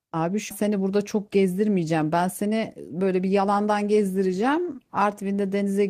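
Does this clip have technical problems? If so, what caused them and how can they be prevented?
Yes. At 0.49 s the speech jumps forward in a skip ahead. Roughly a second of audio is gone. The jump itself lasts only about 20 ms, and nothing fills it. The two sides are joined almost directly. A stretch was dropped while later audio was already queued, either lost in transit or discarded when the jitter buffer overflowed. Keeping the buffer sized to the network's real jitter, and avoiding bursts from the sender, prevents such overflow drops.

From 2.42 s to 3.98 s there is a jitter buffer speed-up. The speech runs at about 112% of normal speed. Its pitch stays the same, and it sounds hurried. The buffer held more audio than its target, so the receiver trimmed many short pieces of one or a few pitch periods in a row. Together they remove around a fifth of a second. Smoother packet delivery, or a gentler catch-up rate, prevents this rushed stretch.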